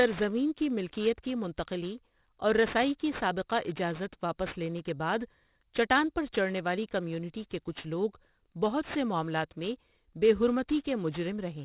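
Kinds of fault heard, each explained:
Aliasing: the sample rate has been lowered without first filtering out content above the new limit, so everything above the 4 kHz fold is mirrored back below it as false, unrelated pitches, which fits a drop from 44.1 kHz to 8 kHz. Throughout this speech, sibilants sound gritty and metallic, with the folded energy at about 20 dB below the signal. On a spectrogram, energy runs hard up to 4 kHz, with mirrored traces moving opposite to the real harmonics.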